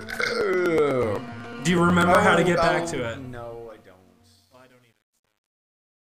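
Regular ticks sound every 0.124 s from 0.16 to 2.15 s. These are periodic USB or driver dropouts, each skipping about a millisecond of audio. From 2.47 s the fade-out turns gritty, harshest from 3.57 s to the end. This is truncation distortion on a fade, from a fade stage keeping only 10 bits without dither.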